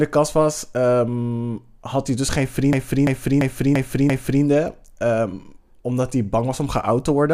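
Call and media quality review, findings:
System hang loop, 2.73–4.44 s: host or driver stalled while the device kept cycling its ring buffer (fits 16384 samples). One 341 ms slice repeats five times, skipping at 2.93 Hz.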